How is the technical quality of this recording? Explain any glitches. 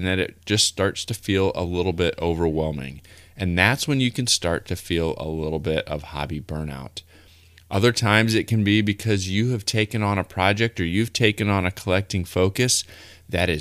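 No glitches are audible.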